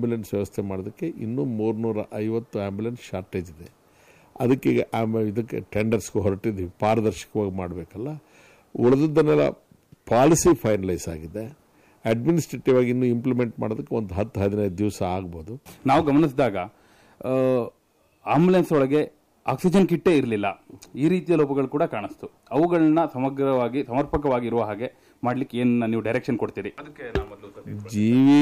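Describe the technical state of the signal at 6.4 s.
At 6.4 s you're hearing hard clipping, and it runs through the whole clip. The signal is driven about 4 dB past what the stage can pass, so a small share of peaks get sliced flat, and those flat tops throw off high harmonics you hear as crackle on the loudest moments.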